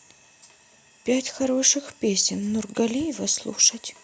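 No audible faults in this recording.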